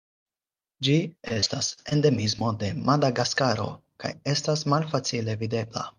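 Speech, with repeated packet loss (robotic sound) from 1.28 to 1.93 s: seven gaps up to 42 ms each are patched by repeating the last sound, covering nearly a quarter of that stretch. On a spectrogram this shows as smeared, striped blocks. A single short concealed packet loss at 2.39 to 2.42 s fills about 15 ms of the 20 ms of missing audio, leaving a brief smear visible as a small discontinuity in the waveform.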